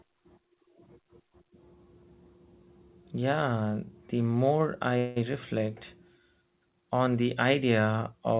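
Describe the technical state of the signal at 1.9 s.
At 1.9 s the speech is intact with no fault, carried through the G.711 A-law call path that leaves nothing above 4 kHz.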